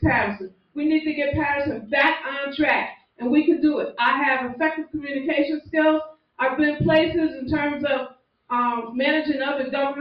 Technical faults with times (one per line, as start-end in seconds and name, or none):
0.00-10.00 noise suppressor applied to music or sounds
0.45-0.76 sound cut by the noise suppressor
2.96-3.21 sound cut by the noise suppressor
6.12-6.39 sound cut by the noise suppressor
8.10-8.50 sound cut by the noise suppressor